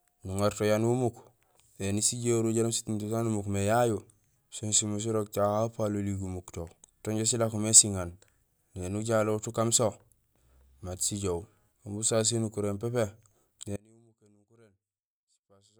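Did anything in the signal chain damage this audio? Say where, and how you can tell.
Yes. The likely cause is a connection in the analogue wiring breaking partway through, while everything downstream stayed live and kept recording. The result is an audio dropout to a faint residue. At 13.77 s the speech drops abruptly, not as a pause or fade, and stays down until the clip ends. What remains is only a faint residue, roughly 30 dB below the signal's normal level, carried through the still-open path.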